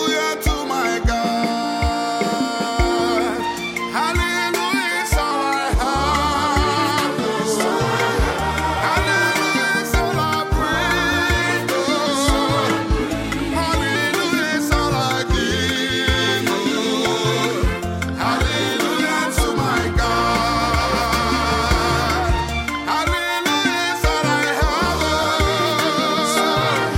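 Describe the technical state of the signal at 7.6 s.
At 7.6 s you're right at the tail of a drift correction step that began at 5.31 s and lets go at about 7.72 s. Everything is running about 6.4% slow, which drops the pitch by 115 cents, a touch more than a semitone flat, and then it snaps back to normal. That's likely clock-matching software changing the playback rate in one jump to refill its buffer, so speed and pitch sag together.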